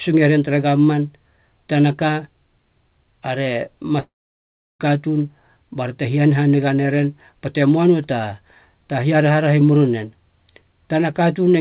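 At 4.0 s the sound breaks off. The final fragment is stretched into a short buzzing tail that fades within roughly a tenth of a second, leaving about 0.71 s of silence. Audio resumes at 4.81 s with about 0.8 s of material simply absent. This pattern points to a long network dropout as the likely cause: packets stopped arriving, and the receiver's concealment briefly extended the last sound before giving up. The surrounding audio stays band-limited to 4 kHz, consistent with a G.711 call path.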